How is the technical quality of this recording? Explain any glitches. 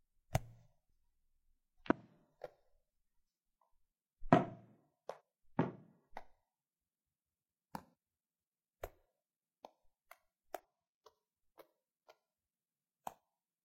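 The recording has five brief glitches. Damaged data in a compressed stream, at 1.86–1.92, 5.16–5.21, 7.90–7.93, 10.59–10.64 and 13.15–13.18 s: corrupted bytes throw the decoder out of sync, heard as short chirps or blips.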